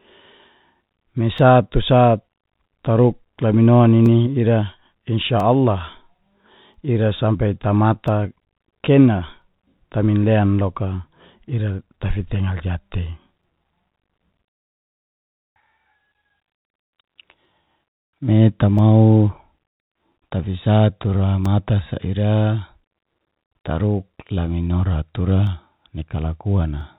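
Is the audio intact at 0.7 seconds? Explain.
Yes, the audio is intact at 0.7 seconds, with only the narrow telephone bandwidth of the call path, nothing above 4 kHz, to be heard there.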